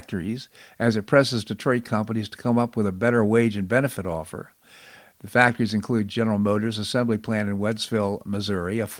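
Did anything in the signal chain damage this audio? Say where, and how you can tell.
No, nothing in the signal chain audibly damaged this speech recording. No stage, from the analogue wiring through to playback, leaves a mark that can be heard here.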